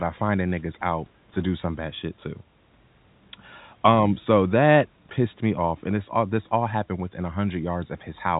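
No technical faults can be heard in the speech.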